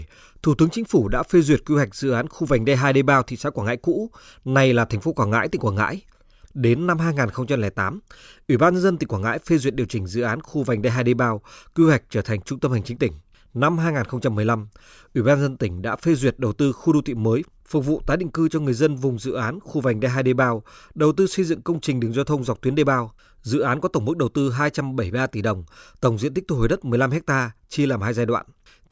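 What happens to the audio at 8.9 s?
Nothing goes wrong at 8.9 s; the speech there plays through intact, with no dropout, click, distortion or other fault.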